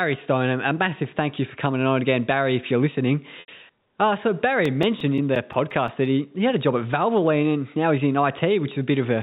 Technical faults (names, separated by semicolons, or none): packet loss with pitch repetition; CD scratch ticks